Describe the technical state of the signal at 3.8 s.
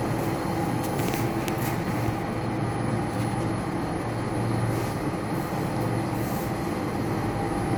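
At 3.8 s the audio is intact, with no dropout, click, distortion or other fault to be heard at that moment.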